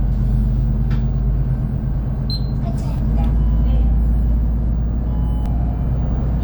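At 2.98 s the sound jumps abruptly. A few milliseconds of audio are missing, and the two sides meet with no gap. At 5.46 s the same happens again, with a longer piece lost, around 10 ms. Both are likely a dropped buffer (overrun). The recording software failed to collect its samples in time. The hardware then overwrote them. So the sound skips forward rather than pausing.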